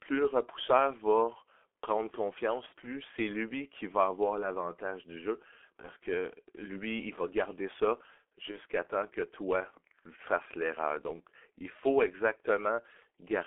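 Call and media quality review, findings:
G.723.1 codec, whole call: speech muffled and hoarse, consonants smeared, nothing heard above about 3.4 kHz or below 300 Hz. Heavy damage, consistent with a 6.3 kbit/s G.723.1 stream. Probable component: codec choice on the media path. Long 30 ms frames and a slowly updated voice model blur fast transitions.

VoIP packet loss concealed by the speech codec, 2.66–2.73 s: speech stretched into a buzzy tone or coloured noise that fades, about 60 ms, which fits two lost 30 ms frames. Decoder repeats last pitch and filter at falling gain.

Same fault, 5.81–5.89 s and 8.51–8.60 s: shorter smears, each fitting one lost frame. Voice stays weak briefly after recovery because each frame builds on the one before. Probable component: network jitter or loss upstream of the decoder.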